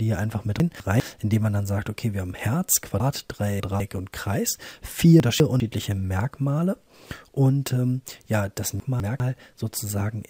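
A jumbled moment comes at 0.6 to 1.0 s, again at 3.0 to 3.8 s, at 5.2 to 5.6 s, and at 8.8 to 9.2 s. Each is a case of chunks out of order. A 200 ms block of audio arrives late and plays after blocks that should follow it, one position late in three places and three positions late at 3.0 s. Nothing is missing, but the reordering leaves three abrupt joins each time.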